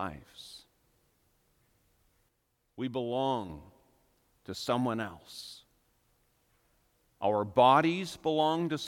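At 2.29 s there's a sudden gain jump: the speech and its background noise both drop by about 6 dB in a single step, then snap back up at 3.50 s. It's likely a gain change applied instantly with no ramp to smooth it.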